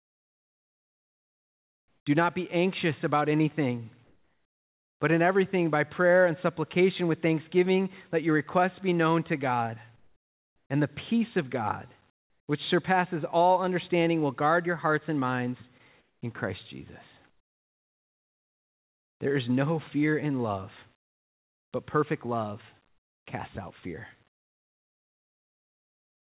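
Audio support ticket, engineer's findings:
Comfort noise in place of the background: pauses at 0–2.06, 4.04–5.0, 9.96–10.7, 12.1–12.48 (before "which surpasses all understanding"), 16.0–19.2 (after "your hearts and minds"), 20.96 to end (after "no fear in love"). Real room tone swapped for steady, featureless hiss, about 6 to 16 dB quieter. Likely DTX with receiver-generated noise. Spectrogram: smooth uniform noise blocks, nothing above 4 kHz, fitting a narrowband G.711 path; waveform: flat low-level bands.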